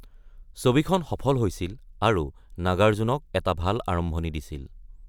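Speech recording with no audible technical faults.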